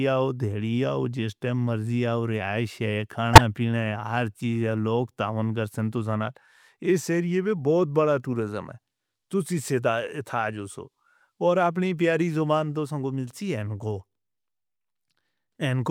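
At 3.33 s, right after "رہائش ہے", a corrupt frame decoded produces a harsh burst lasting until 3.41 s. Damaged bits in the compressed stream made the decoder misread gains and spectral codes, throwing energy into the wrong frequencies. The roughly 80 ms span suggests a handful of consecutive codec frames. Unlike concealment after packet loss, which fills the gap with a smoothed copy or a quiet patch, this is loud, alien noise.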